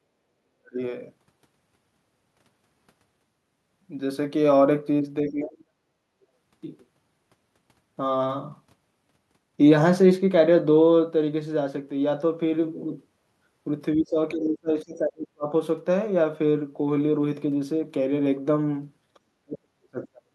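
The speech drops out at 0.01 to 0.05 s, 0.41 to 0.79 s, 5.24 to 6.15 s, 13.95 to 15.48 s and 19.35 s to the end, sinking by about 30 to 40 dB. This is speech suppressed in double talk, likely an echo canceller muting the near talker while the far side spoke. On a waveform the envelope collapses into near-flat stretches; a spectrogram shows the energy fading across those spans.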